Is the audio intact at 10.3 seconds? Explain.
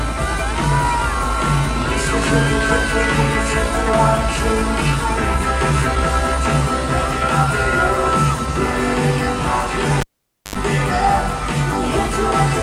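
No. At 10.3 s the audio is inside a cable pulled and plugged in event spanning 10.00 to 10.56 s. Disconnecting the live lead gives a pop, then about 0.5 s of near silence, a 76 ms burst of 50 Hz mains buzz as the tip makes contact, and another pop on reconnection.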